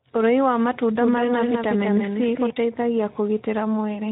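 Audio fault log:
Throughout: Speex codec. The speech has a plainly audible hoarse, grainy coating, typical of this CELP codec when it runs at a low setting. The damage fits a rate around 11 kbps, where there aren't enough bits to model the excitation cleanly, so the voicing comes out rough and noisy instead of smooth. Nothing is left above 3.8 kHz, which gives the clip a narrow, telephone-like dullness on top of the grit.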